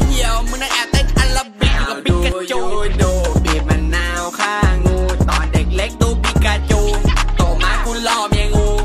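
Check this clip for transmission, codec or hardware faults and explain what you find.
No transmission, codec or hardware fault can be heard anywhere in the clip.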